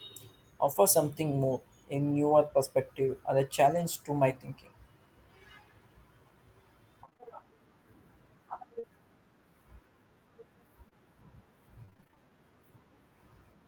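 Speech with network packet faults. Around 0.65–0.67 s and 3.75–3.81 s, a lost packet was rebuilt from error correction: the decoder played low-bitrate backup copies, so 20 ms and then 40 ms come through rougher and noisier rather than dropping out. From 7.05 to 7.24 s, repeated packet loss opened five small gaps, each patched by extending the previous sound, giving a choppy, robotic stretch. At 8.79–8.85 s, short concealed packet loss left a 40 ms hole, filled and blended back, heard as a brief smear. From 10.89 to 12.18 s, repeated packet loss returns with ten gaps of up to 25 ms, leaving intermittent robotic chop with fragments missing.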